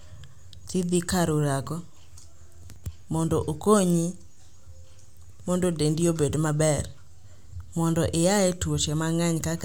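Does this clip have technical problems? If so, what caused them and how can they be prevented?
Yes. Dropped buffer (overrun) at 2.76 s and again at 7.24 s: at each the speech jumps abruptly forward rather than pausing, losing roughly 70 ms at the first point and about 40 ms at the second. The likely cause is the recording software failing to read its audio buffer before the hardware overwrote it, so a chunk vanished and the surrounding audio was spliced together. Larger buffers and a less loaded system during recording prevent this.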